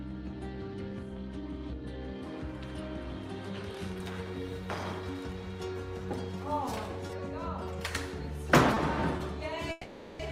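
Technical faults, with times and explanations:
7.07 s, 8.74 s and 9.17 s, short stall from a late packet: Each time, a packet missed its playout moment and the jitter buffer briefly ran dry. The receiver held the last fragment of sound for about 20 ms until the packet turned up, then resumed from the same point. Nothing is lost, but at each of these moments a sound is drawn out slightly, with a faint buzz or dip, and the playback delay grows by about 20 ms.
9.71–10.22 s, call audio freeze: The sound stops moving forward for about half a second. The receiver keeps extending the last bit of audio as a fading buzz or hiss, which never reaches full silence, and fills about 480 ms before playback picks up exactly where it left off. This is likely the result of packets being held up in transit long enough to drain the jitter buffer. Little or nothing is skipped. Instead, a gap is inserted, pushing everything after it about 480 ms later.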